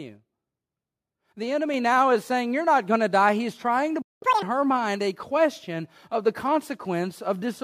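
At 1.74 s the microphone volume stepped up by about 4 dB. Voice and background jump together, and the waveform envelope widens abruptly in a single step. From 4.02 to 4.22 s a playback stall silences the output for about 0.2 s, likely because the player ran dry or was blocked. It appears as a flat gap in the waveform and a blank column on the spectrogram. From 4.22 to 4.42 s the catch-up at higher speed plays at twice normal rate. Pitch rises by roughly ten semitones, with harmonics stretched upward and compressed in time on the spectrogram.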